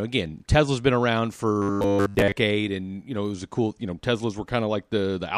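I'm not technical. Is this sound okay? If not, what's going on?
No. From 1.62 to 2.32 s the voice turns into a rigid, metallic buzz: robotic sound from repeated short buffers. Throughout that stretch, the sound is essentially all one tiny slice of audio played over and over. The buzz sits at 100 Hz, which fits a 10 ms chunk being looped. This is likely because new audio arrived too slowly, so the software kept replaying the last bit while the real audio in between was skipped.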